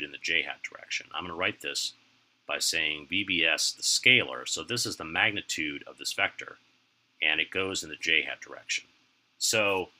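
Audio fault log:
No faults are heard anywhere in this audio. There is nothing to log.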